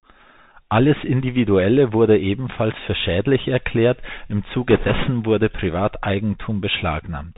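Throughout, the speech carries the sound of a Bluetooth CVSD headset codec, and its damage is plainly audible. The link sends one bit per sample at 64 kHz. Each bit only says whether the waveform goes up or down, and the step size adapts. Nothing above 4 kHz survives, so the sound is narrow and boxy. Sibilants turn scratchy. Sudden loud, bright sounds overrun the step and smear. A fine granular hiss sits under everything.

From 4.71 s to 5.10 s, right after "für schädlich erklärt im", bit errors on the Bluetooth voice link break in. The error rate is high, a few percent of bits. Every CVSD bit carries the same small weight, and the decoder recovers quickly. So there are no sharp clicks. Instead a rushing, crackly noise washes over the speech for about 0.4 s, then clears.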